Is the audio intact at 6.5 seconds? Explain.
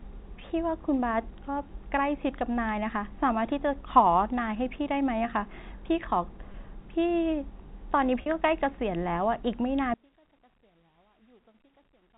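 No. There is a brief dropout from 6.52 to 6.54 s, heard as packet loss with pitch repetition. About 20 ms of audio is missing, which fits a single lost packet. The receiver fills the gap by repeating the last pitch period of the speech and fading it down. Because the loss is so short, it sounds like a slightly held, buzzy sound before the speech carries on. The G.711 telephone band stays audible around it.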